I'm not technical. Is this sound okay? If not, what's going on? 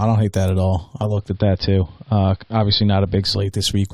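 No. Just after "don't hate that at", at about 0.87 s, the speech fades over roughly half a second into a duller, muffled version with a faint hiss behind it, and it stays that way until about 3.69 s. This is digital radio blending to analogue: the radio lost its clean digital signal and switched to the older AM broadcast of the same station. AM carries much less treble, which takes away the crisp top end.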